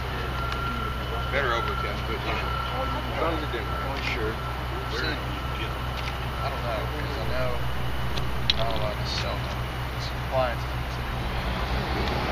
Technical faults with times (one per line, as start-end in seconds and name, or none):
7.26-8.86 DC step